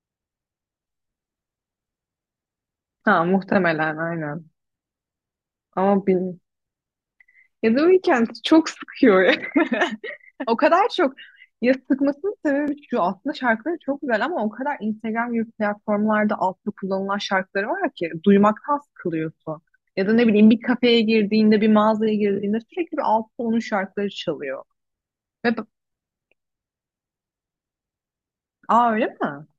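At about 12.68 s the speech gives a tiny jump forward, no gap at all. That's likely a dropped buffer (overrun): the samples weren't read in time, got overwritten, and a few milliseconds vanished, leaving the two sides butted together.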